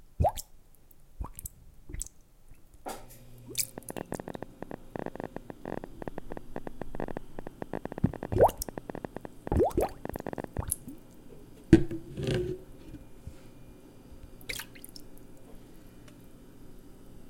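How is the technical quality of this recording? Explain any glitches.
The recording has one clear glitch, a train of clicks from 3.78 to 10.61 s. Something was likely injecting pulses into the signal chain, such as interference from nearby equipment or a faulty connection or power supply. Around a hundred near-identical clicks arrive at about 13.3 per second, unevenly spaced. Each peaks well above the underlying sound, so they are heard as an irregular ticking or popping laid over the audio for almost seven seconds.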